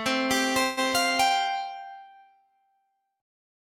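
From start to finish there's a noise suppressor applied to music or sounds, a speech-tuned one left running on material it doesn't suit. It keeps treating held, steady parts and their tails as noise and pulling them down, while attacks mostly slip past. So the level pumps and thins as things sustain, with swings somewhere around ten decibels between what it lets through and what it squashes. That gives the whole clip a breathing, hollowed-out feel.

At 0.63 s there's a short hiccup that sounds like a call audio freeze. For about 0.16 s, up to 0.79 s, the last bit of sound gets stretched out as a fading buzzy continuation instead of moving forward. Then the audio picks up right where it left off, so nothing is actually lost, but everything after lands about 138 ms later than it would have. The likely cause is packets stalling in transit and the jitter buffer running dry.

From 1.76 s to 2.79 s you get sound cut by the noise suppressor, a slightly deeper bite than the background pumping. 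For roughly a second the suppressor decides this stretch is noise and pushes it down hard, about 12 dB at the deepest point. Whatever is sustained or decaying there sinks and has its tail chopped short, while any sharper onsets come through more intact, so it sounds like the sound is ducking away under you.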